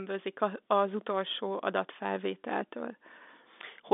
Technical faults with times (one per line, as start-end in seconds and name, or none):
none